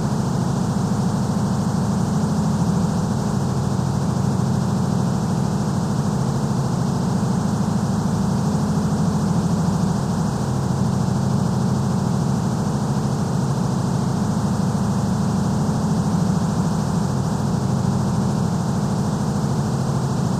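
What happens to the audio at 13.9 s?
Nothing goes wrong at 13.9 s; the sound there plays through cleanly, with no dropout, click, distortion or other fault.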